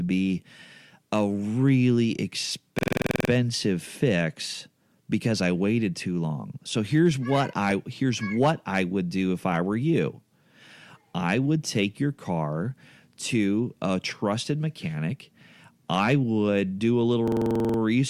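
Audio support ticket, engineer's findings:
Harsh low rattle over speech, 2.79–3.30 s, just before "fix because I waited". This is a system hang loop: one 46.4 ms slice repeats 11 times at 21.5 Hz, which fits a 2048-sample ring buffer replayed while the driver stalled. Essentially no audio lost.

Same rattle at 17.28–17.79 s, right after "would do a little". Same system hang loop mechanism, same 46.4 ms slice at 21.5 Hz, 11 repeats, again pointing to the playback driver/buffer path.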